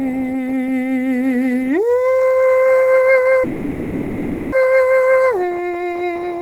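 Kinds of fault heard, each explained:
Call audio freeze: At 3.43 s the music stops moving forward and the last sound is held on as a smeared, fading tone for about 1.09 s, never dropping to silence, until normal playback resumes at 4.55 s. The cause is likely a stall in packet delivery that drained the receiver's jitter buffer, so the receiver stretched its final audio to cover the wait. Nothing of the music is lost; it continues from the exact point it halted, now about 1.09 s later than before.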